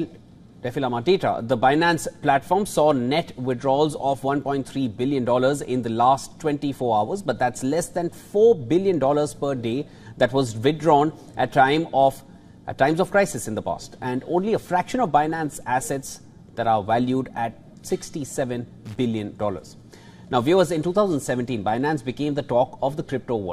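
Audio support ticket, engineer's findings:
Loose connector crackle, 18.86–18.99 s (about 0.14 s). Probable component: worn or dirty contact in a cable plug or jack. Contact intermittently making and breaking under movement, chopping the signal on and off, with any DC on the line adding pops at each break. Heard as a short, irregular burst of scratchy crackle.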